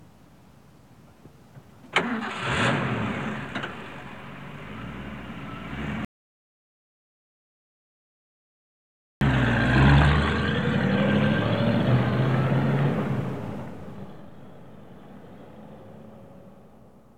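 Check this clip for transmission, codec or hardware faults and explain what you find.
One fault is present: an audio dropout to silence from 6.05 s to 9.21 s, losing about 3.16 s of material. The sound cuts off abruptly mid-flow and returns just as abruptly, and the gap between is dead digital silence with no room tone or noise floor. That points to the input signal vanishing while the recording chain kept writing silence, likely from a disconnected device, a dropped link or an accidental mute. Whatever occurred during that interval is unrecoverable.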